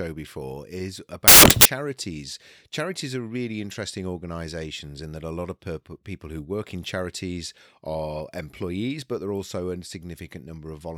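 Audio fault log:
1.28–1.65 s, samples built from the wrong bytes: the reader assembles each sample's bytes in the wrong order or alignment, so the rapidly changing low bits dominate and loud white noise replaces the speech; the waveform swells into a dense block far louder than the speech around it, and the spectrogram shows a flat broadband block.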